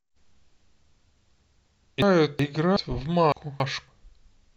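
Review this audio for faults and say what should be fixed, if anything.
Frames out of order at 2.02–2.77 s and 3.32–3.88 s. In each span, two neighbouring runs of speech, about 0.37 s and 0.28 s long respectively, play with their halves exchanged. This gives a garbled flutter, without any loss of duration. To prevent it, reorder frames by sequence number in the receive buffer before they reach the decoder.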